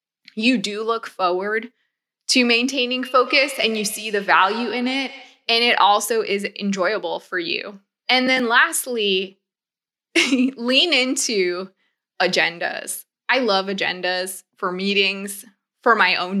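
Speech with feedback echo between two devices from 3.02 to 5.49 s: repeats about a tenth of a second apart, peaking about 15 dB under the voice, from two devices sharing a room and call.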